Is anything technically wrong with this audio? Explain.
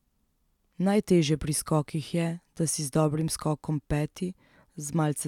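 No, nothing stood out as technically wrong on listening to this speech recording.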